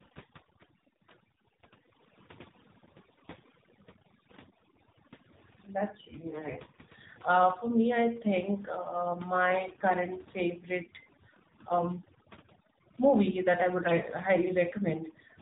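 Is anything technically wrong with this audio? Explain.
Yes, the speech carries three kinds of technical fault.

Overdone noise removal runs through the whole clip. The noise reduction was set too strong, so any frequency band that falls close to its noise estimate is pushed far down or shut off entirely, and the quieter parts of the speech are taken along with the noise. Between phrases the background drops to near silence dotted with twinkling specks.

An AMR narrowband mobile codec is also present throughout, and its damage is plainly audible. AMR-NB works at 8 kHz sampling, rebuilding speech from a vocal-tract model excited by a handful of pulses per subframe, so nothing above 4 kHz survives. The band-limited, boxy tone and the buzzy, synthetic edge point to a low mode, consistent with about 7.4 kbps, where too few bits remain to describe the excitation faithfully.

AMR bit errors strike twice, from 6.30 to 6.53 s and from 13.78 to 14.10 s, the second starting just after "movie that I". 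On a weak link, the less protected bits of the codec frames arrived flipped while the check on the critical bits still passed, so the decoder misplaced the excitation pulses and used wrong fine pitch, gain and spectral values. The first burst, with a heavier error rate of several percent, and the second, lighter one both keep roughly the right pitch and level but turn hoarse, scratchy and gargly.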